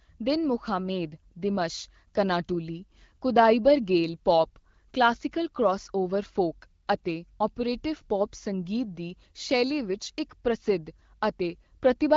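No technical faults can be heard in the speech, which comes through the AMR wideband (HD Voice) codec at 12.65 kbit/s with only the light coding effects expected at that rate.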